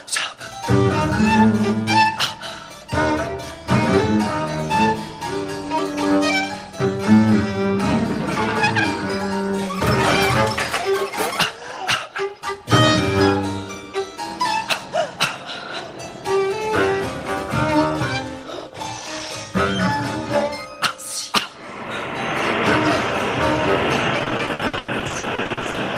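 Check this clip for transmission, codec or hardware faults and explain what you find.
There's one transmission fault near the end: repeated packet loss (robotic sound) from 24.19 to 25.77 s. Packets kept dropping, each hole patched by stretching the last sound, up to 100 ms at a time, covering nearly half that stretch. It sounds choppy, with pieces missing.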